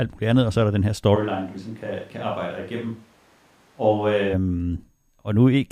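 After "er der den her", from 1.17 to 4.32 s the speech turns abruptly roomy and hollow: a switch to a distant microphone, likely replacing a failed close one. The waveform drops about 10 dB; the spectrogram shows thinner lows and a faint noise floor between phrases.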